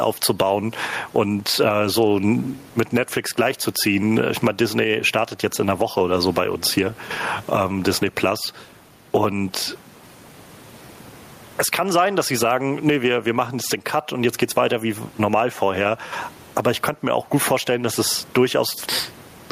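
Throughout the speech, gain pumping is audible, a swing of around 15 dB. The likely cause is input gain set far too high, with a fast limiter pulling it down. Unlike a noise gate, it never cuts the room noise, which sits about 38 dB below the speech.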